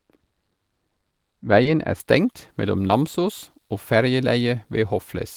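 From 0 to 2.0 s, de-emphasis applied wrongly cuts the treble to about 13 dB down at 10 kHz relative to 1 kHz, making the speech dull, with a darkened spectrogram top. At 1.63–1.67 s and 2.87–2.91 s, short concealed packet loss fills a 20 ms gap with extrapolated sound, heard as a brief smear and seen as a smoothed waveform patch.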